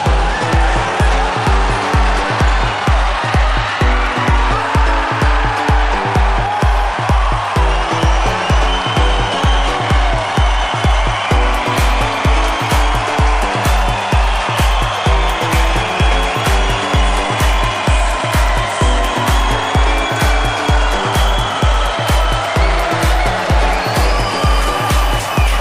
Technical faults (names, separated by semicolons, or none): none